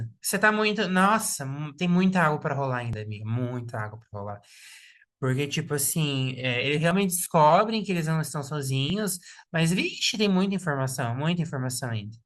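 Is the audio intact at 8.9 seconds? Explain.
No. At 8.9 s there is an overlap between stream segments. Overlapping time stamps make the player discard about 5 ms of real audio, so the waveform jumps, heard as a tiny skip.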